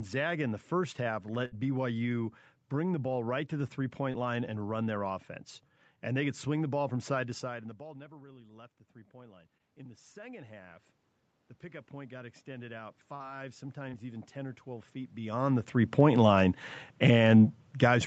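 At 1.45 to 1.54 s a burst of packet loss cuts out about 60 ms of speech. The receiver extends the last sound and fades it, so a held buzz or decaying hiss bridges the gap before the speech resumes further along. On a spectrogram the harmonics flatten into unchanging horizontal bands, and the waveform envelope tapers smoothly before an abrupt restart.

From 4.12 to 4.16 s, after "right to the three" and before "line and run their", comes the first short concealed packet loss. A 20 ms hole is filled by continuing the preceding sound and blending back, heard as a brief smear or wobble. It appears as a thin vertical strip where the fine detail briefly smooths out.

From 6.89 s, after "could swing the ball", automatic gain rising follows the talker moving away from the microphone around 7 s, which drops the input by about 23 dB. The gain control climbs about 10 dB until 10.91 s, swelling voice and room noise together. 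The waveform envelope and the spectrogram noise floor both brighten steadily over roughly four seconds.

Within that rise, a concealed loss at 9.58 to 9.61 s smears about 20 ms.

A second automatic gain rise runs from 11.60 to 14.98 s, ending just before "beyond the three point". It adds about 7 dB, seen as a gradually widening envelope.

Inside it, concealed losses at 13.15 to 13.22 s (about 40 ms, a longer wobble) and 13.90 to 13.94 s (about 20 ms) each leave a short smoothed patch in the spectrogram.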